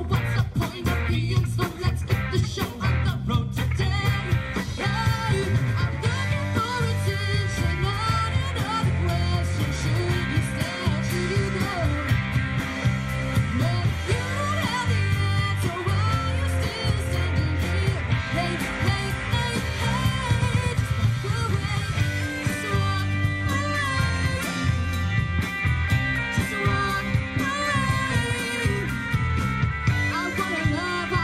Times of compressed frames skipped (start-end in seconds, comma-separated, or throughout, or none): 19.32, 24.36